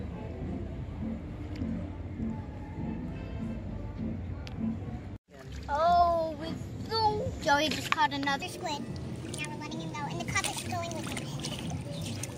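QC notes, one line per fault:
8.42–12.38 s, section at the wrong speed: from 8.42 s to the end of the clip the audio runs at 1.29 times its proper rate, so it suddenly sounds hurried and sits about four semitones higher. Tempo and pitch jump together at the boundary because the samples are simply read out faster rather than time-stretched. The likely cause is this stretch being played back or rendered against the wrong clock, as in a mismatched sample-rate setting for that segment.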